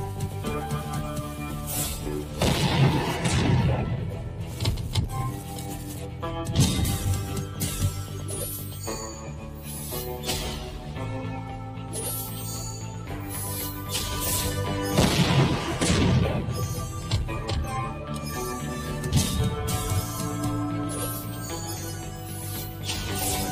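From start to finish the clip shows a noise suppressor applied to music or sounds: processing built to clean up speech stays active on material it was never meant for. It treats sustained tones, room ambience and decaying tails as noise, pulling them down by something like 5 dB while transients pass largely intact. The level therefore rises and sinks with each onset, giving a pumping, fluttering character, and held portions of the sound come across thinned and hollow.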